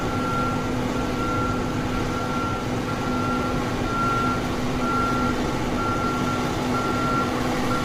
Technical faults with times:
0.00-7.85 low-delay AAC compression

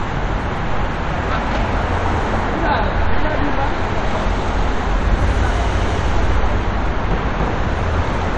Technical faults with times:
none

